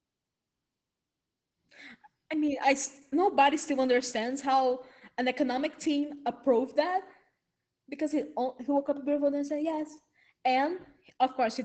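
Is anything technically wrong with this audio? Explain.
Yes. Opus voice compression runs throughout. Nothing lies above 8.8 kHz, which fits wideband SILK near 12 kbps. Coarse coding leaves the speech muffled, hoarse and slightly robotic.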